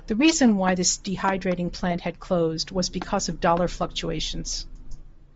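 From start to end the speech carries plainly audible Bluetooth LC3 compression damage, likely from a low-bitrate link that fits about 32 kbps in 7.5 ms frames. Upper spectrum is discarded and refilled with noise, giving a breathy, grainy edge. A spectrogram shows blotchy, noise-textured highs in short frame-sized blocks.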